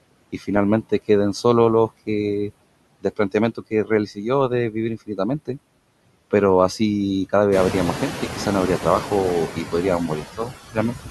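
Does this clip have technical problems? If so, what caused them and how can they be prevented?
Yes. Noise suppressor artifacts run throughout: steady noise is pulled down by about 21 dB, leaving near-empty gaps between words on a spectrogram, with the noise rising again under speech. To prevent this, use gentler suppression or reduce noise at the source.

Speech cut by the noise suppressor occurs at 0.33–0.5, 3.55–3.9, 10.08–10.52 and 10.72–11.09 s. Quiet speech was mistaken for noise and dipped by about 10, 13, 14 and 16 dB, visible as sudden notches in the waveform. To prevent this, set the suppressor's speech detection more conservatively so soft endings aren't classed as noise. The room noise that rises around 7.5 s, staying about 9 dB below speech, is part of the recording.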